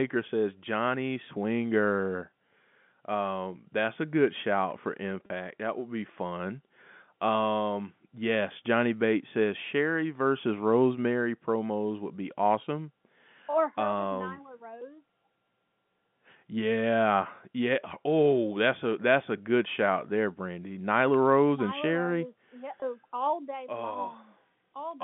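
A brief held, buzzy smear at 5.26–5.30 s and 22.80–22.82 s is packet loss with pitch repetition, where the last pitch period was looped to fill 40 ms and 20 ms gaps.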